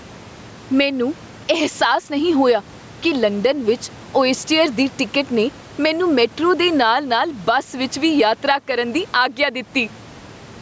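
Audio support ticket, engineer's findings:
Gain pumping across the whole speech clip, with roughly a 10 dB gain swing. The likely cause is mic gain set far too high, with a fast limiter clamping each peak.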